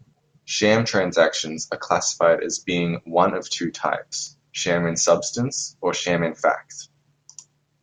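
Two sharp clicks in this speech, at 4.27 s just after "being one of two" and again at 5.08 s, are likely dropped samples: a handful of samples, well under a millisecond, go missing, so the waveform leaps abruptly to a later value.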